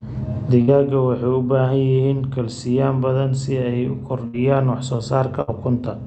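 A burst of packet loss hits the speech at 0.61 to 0.70 s, 4.27 to 4.36 s after "badan si ay u", and 5.41 to 5.50 s after "wax soo". Each time, about 60 ms is concealed by a fading continuation of the last sound. Then speech jumps ahead, with roughly 60 ms missing.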